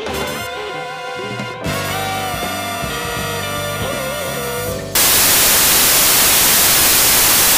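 At 4.95 s the audio turns into loud, harsh broadband noise until the end: samples built from the wrong bytes, with low-order bits misread as the high part of each value.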